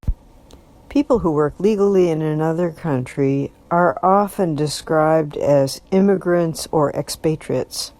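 From 1.73 to 6.63 s a time-stretched section slows the speech to about 0.64 speed with pitch unchanged, likely software stretching, sounding dragged, with spectrogram features drawn out and repeated.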